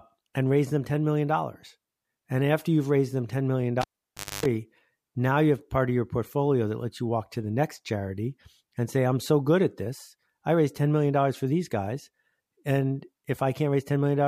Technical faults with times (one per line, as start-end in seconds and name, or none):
3.81-4.46 cable pulled and plugged in